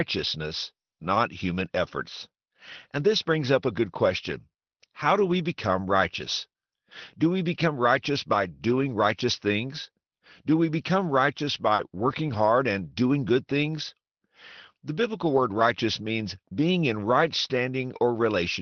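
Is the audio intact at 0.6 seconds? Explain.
Yes, the speech at 0.6 seconds is intact, with no dropout, glitch or other fault at that moment.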